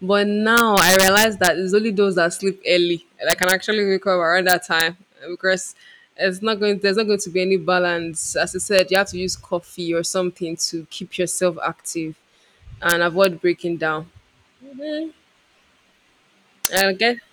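Integer overflow strikes at 0.57–1.47 s, 3.30–3.52 s, 4.49–4.81 s, 8.79–8.95 s, 12.90–13.25 s and 16.65–16.81 s. Loud speech peaks, driven from about 0 to 6 dB past full scale, wrap to the opposite sign instead of being limited. Each wrap is a violent crack far harsher than clipping. The waveform shows full-range sign flips, and the spectrogram shows broadband vertical streaks.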